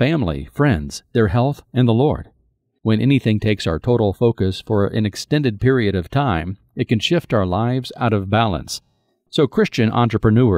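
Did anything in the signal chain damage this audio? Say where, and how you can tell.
No, nothing in the chain from capture to playback leaves an audible mark on this speech recording.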